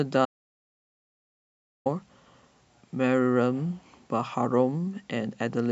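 Speech recording with an audio dropout to silence from 0.25 s to 1.86 s: the signal cuts out abruptly, leaving about 1.6 s of silence with no room tone, then resumes mid-flow. The likely cause is a lost input, such as a disconnected device or a brief mute.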